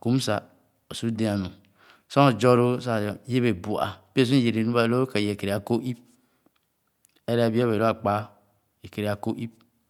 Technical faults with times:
none

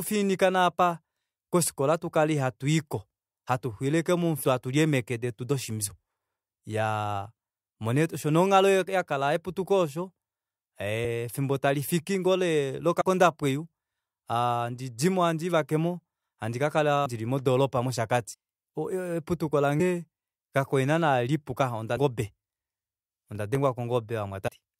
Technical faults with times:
4.43 compressed frames skipped
13.00 compressed frames skipped
17.05 compressed frames skipped
18.33 compressed frames skipped
19.79 compressed frames skipped
23.03-23.55 processor overload crackle
24.47 compressed frames skipped

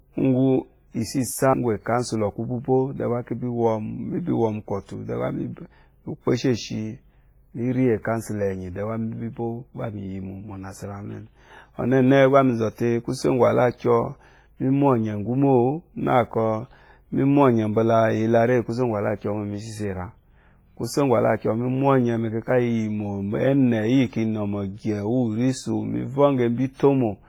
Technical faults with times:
0.00-27.29 WMA compression
26.74-26.79 pre-echo

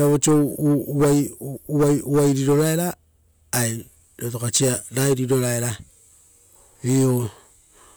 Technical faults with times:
none

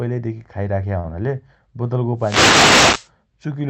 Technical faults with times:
0.99-1.06 short stall from a late packet
2.17-3.10 wireless microphone noise hit

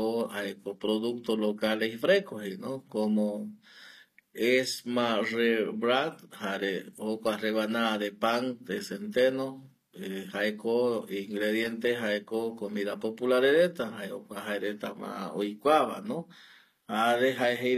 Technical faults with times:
0.00-17.77 HE-AAC compression
11.62-11.67 loose connector crackle

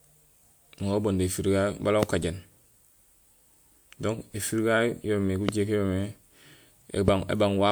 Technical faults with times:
2.03-2.05 loud pop
2.23 repeated buffer
4.47 repeated buffer
5.49-5.51 loud pop
7.08-7.10 loud pop

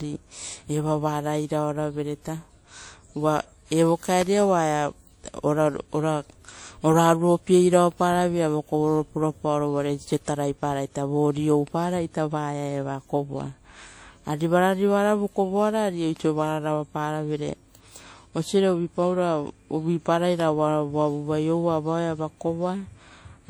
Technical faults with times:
0.00-23.49 WMA compression
4.21 electrical switching spike
20.40 electrical switching spike

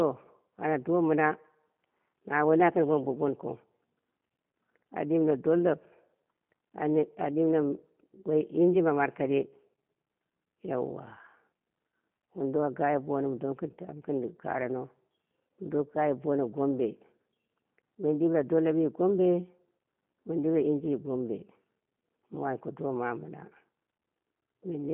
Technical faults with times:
0.00-24.93 G.729 codec

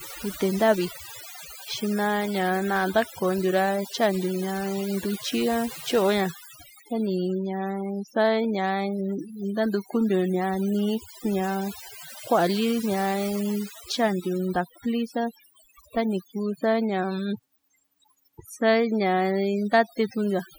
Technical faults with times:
0.00-20.59 overdone noise removal

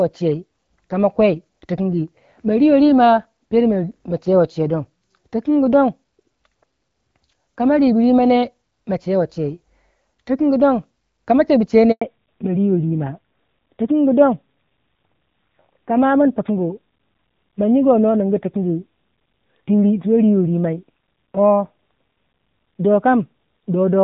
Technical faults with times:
11.91-12.01 handover gap
12.01-24.03 fallback to narrowband

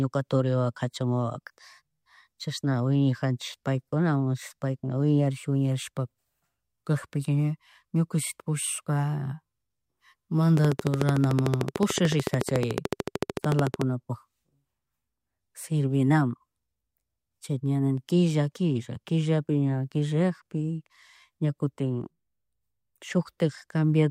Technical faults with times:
10.57-13.82 train of clicks

